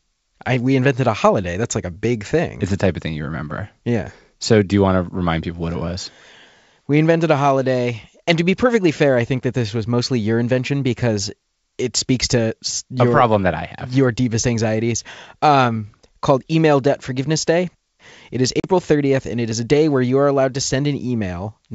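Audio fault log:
18.60–18.64 s, packet loss on an ADPCM call: a hard-edged 40 ms hole of pure silence, about a couple of packets' worth. It differs from a plain dropout because the G.722 decoder's predictor and step size lose sync, so the speech returns disturbed for some tens of milliseconds.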